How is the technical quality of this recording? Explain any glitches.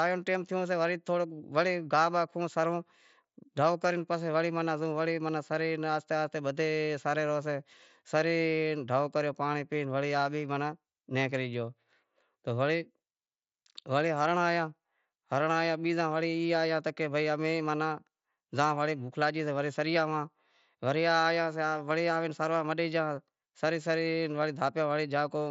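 No glitches are present; the speech arrives over a wideband Bluetooth mSBC headset link with audio up to about 8 kHz and only the light grain that codec leaves on louder passages.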